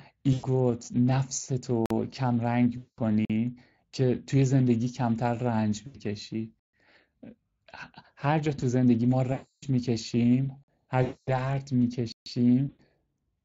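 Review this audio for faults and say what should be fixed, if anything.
The Speex codec runs through the whole clip at a setting that fits roughly 20 kbps. Its CELP coder has too few bits to model the excitation accurately, so the speech comes out noisy and hoarse, with plainly audible damage. To prevent this, run Speex at a higher quality setting or use a more modern wideband codec such as Opus.

VoIP packet loss concealed by the speech codec occurs six times:
0.33 to 0.45 s, about 100 ms
2.78 to 2.99 s, 200 ms
5.86 to 5.99 s, 80 ms
9.32 to 9.64 s, 300 ms
11.03 to 11.52 s, 240 ms
12.69 to 12.81 s, 100 ms

Each time, the decoder keeps extrapolating from the last pitch and filter it received while lowering the gain. The result is a buzzy or coloured, fading smear. Because each frame builds on the one before, the voice stays weak or distorted for a short while after the packets resume. The fix is a jitter buffer with forward error correction or redundancy on the network path.

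Block of digital silence appears at 1.86, 3.25 and 10.64 s as holes of about 46 ms. That length fits a 2048-sample output buffer that was not filled in time. At 6.60 to 6.73 s and 12.12 to 12.26 s there are longer holes of about 139 ms, roughly three such blocks in a row. The audio cuts out and comes back with no fade. The fix is larger buffers or higher scheduling priority for the audio thread so it never misses its deadline.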